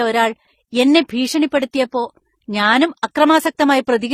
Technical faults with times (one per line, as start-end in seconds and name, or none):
0.00-4.14 transcoding between lossy codecs